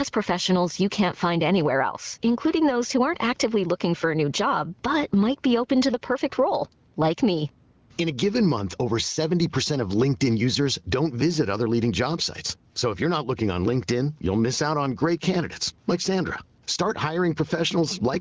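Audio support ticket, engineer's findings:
Gain pumping, throughout the clip. Swing around 10 dB. Loud and soft passages pushed close together, speech sounds squashed. Likely cause: microphone input gain set far too high, with a fast limiter or compressor clamping on each peak and releasing in the gaps. Check the input gain stage first. Call filtering trims lowest bass; wideband speech coding sounds clean.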